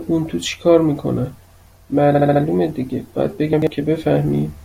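A speech recording with two faults. Repeated frames at 2.14–2.42 s make a stutter, with a 70 ms slice, which fits a block of three compressed frames, playing four extra times and adding 0.28 s. The same sound recurs, unlike a reordering. Chunks out of order at 3.53–3.67 s put a 46 ms chunk two chunks late, so nothing repeats or drops. It sounds briefly jumbled, with three hard joins.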